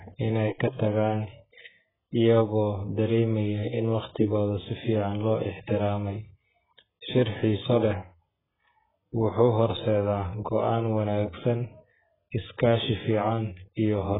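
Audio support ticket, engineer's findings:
Dull, muffled speech throughout, nothing above 3.8 kHz, warbly smeared texture on sibilants. Likely AAC compression at a very low bitrate, around 8 kbps: cut-off lowered, spectrum coarsely quantised.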